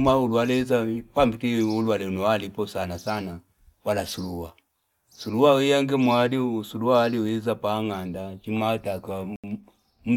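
A speech clip with one Bluetooth stall: the sound drops to silence for 77 ms at 9.36 s, likely because interference delayed packets until the headphone buffer emptied.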